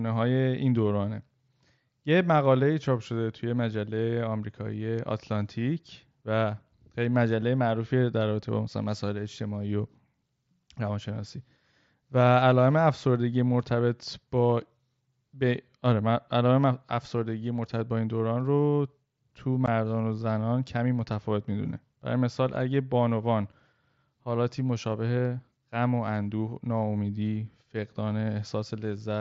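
At 19.66 s there is unconcealed Bluetooth headset packet loss: 15 ms of speech vanished between headset and phone and silence or an idle pattern took its place, which fits two lost mSBC frames. The waveform shows a notch with sharp edges, the spectrogram a thin vertical gap up to 8 kHz.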